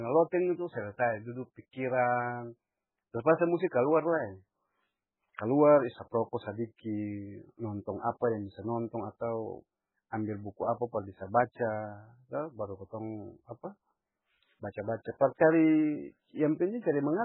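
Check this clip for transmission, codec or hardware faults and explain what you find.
There's one fault, and it runs the whole way through this speech: heavy MP3 compression, likely. Nothing comes through above 4 kHz, so sibilants go dull and metallic, while starved frequency bands flicker in and out, giving that watery swirl. That fits a very low bitrate, around 8 kbps.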